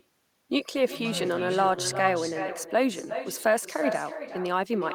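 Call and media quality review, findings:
Echo with no canceller, whole clip: every phrase repeated roughly 0.4 s later, about 10 dB down, thinner. Far-end loudspeaker-to-mic path with no echo cancellation, returned over the network round trip. Spectrogram: faint delayed duplicate of each speech band.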